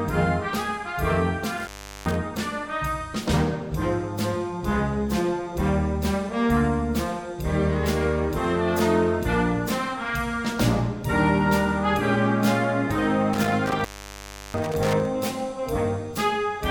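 The sound suffers from intermittent contact, twice. From 1.58 to 2.16 s it cuts out, with the line open for about 0.39 s. From 13.33 to 15.06 s it drops again, open for about 0.70 s. A loose plug or cable is breaking the signal path, leaving crackle at the edges and faint hiss between.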